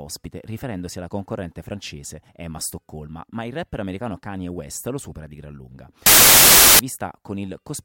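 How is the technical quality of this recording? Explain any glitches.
There is one glitch: samples built from the wrong bytes, from 6.06 to 6.79 s. For about 0.73 s the bytes of each sample are assembled wrongly, so the rapidly changing low bits become the dominant part of each value. The speech is replaced by loud, harsh broadband noise, close to white on the louder sounds.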